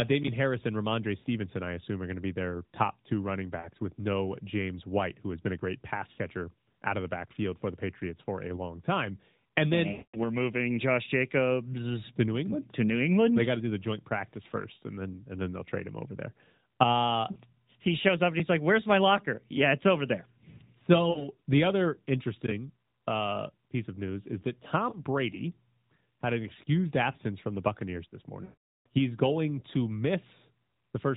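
Lost AMR speech frames break up the speech at 1.20–1.27 s, just before "I assume are going", and again at 3.60–3.69, 6.12–6.19, 9.92–10.17 s (before "we're moving"), 17.32–17.38, 21.10–21.28 s (before "the other interesting uh"), 24.90–25.03 and 28.44–28.86 s. Corrupted frames were discarded, and the decoder filled each gap by replaying the last good voice settings at falling level. The short gaps are brief dips or warbles. The longest, 0.25 s and about 0.43 s, stretch into a smeared tone that fades to silence before the speech returns rough.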